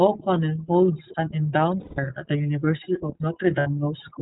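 Throughout, the speech carries plainly audible iLBC codec damage. Nothing above 4 kHz survives, and the voice sounds rough and synthetic, consistent with iLBC's 13.33 kbps, 30 ms-frame mode. From 1.80 to 1.99 s, about 180 ms of lost iLBC frames are concealed by a repeated pitch cycle mixed with noise, heard as a held, buzzy vowel. A shorter 60 ms loss at 3.60 to 3.67 s is concealed the same way, and the voice recovers immediately afterwards.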